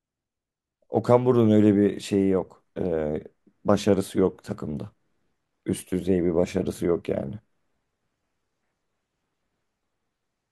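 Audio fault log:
No faults were detected anywhere in this speech recording.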